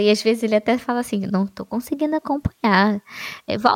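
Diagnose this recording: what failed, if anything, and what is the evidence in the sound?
Nothing in this speech recording points to a failure at any stage of the chain. No event stands out that could be pinned to a time or traced to a mechanism.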